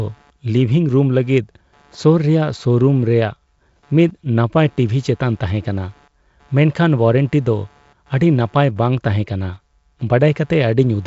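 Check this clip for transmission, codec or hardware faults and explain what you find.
One hardware fault runs through the whole clip: computer activity noise. The audio circuit shares a ground with the computer's processor, graphics or mouse, and their shifting current draw pushes that ground around. The result is a faint buzzing, chirping texture pulsing at roughly 150 Hz, sitting about 40 dB below the speech. It rises and falls with the machine's workload rather than with the talker. The G.722 wideband coding at 56 kbit/s leaves nothing above 7.7 kHz, with a light hiss in the band above 4 kHz.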